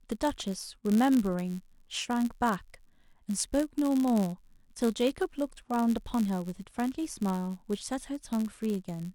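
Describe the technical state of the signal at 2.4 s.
A block size mismatch (padded) runs throughout: each short block is zero-filled, so the speech carries a 91.5 Hz buzz and plays at 0.996 speed, timbre unchanged.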